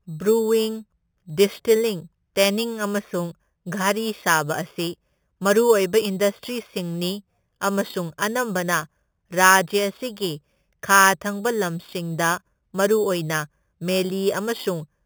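Speech with imaging from sample-and-hold upsampling throughout: a metallic fizz about 13 dB down, mirrored into 4 to 8 kHz and pointing to 8 kHz audio raised to 48 kHz. Unlike hiss, it follows the speech and moves against its pitch.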